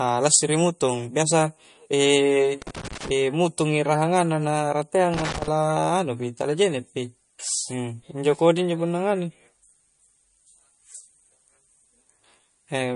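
MP3 compression runs through the whole clip, from the start to the end. The speech has a plainly audible watery, swirling quality and nothing above about 10.6 kHz, a hard treble ceiling. This is likely the work of a lossy MP3 encoder that was starved of bits, which fits a low setting around 40 kbps. Short of data, the encoder discards weaker frequency components. Those components drop in and out from one frame to the next, which gives the swirl, and it cuts off everything above a fixed frequency.

Loose connector crackle first appears from 2.62 to 3.10 s as an irregular burst of scratchy crackle laid over the speech. It returns from 5.14 to 5.48 s, just after "rahanganna na". Both bursts come from a worn or dirty contact that rapidly makes and breaks as it shifts. Each break chops the signal, and any DC present on the line turns the breaks into pops, which together produce the rough, uneven texture.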